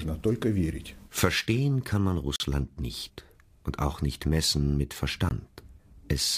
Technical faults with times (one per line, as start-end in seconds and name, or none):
2.36-2.40 block of digital silence
5.29 block of digital silence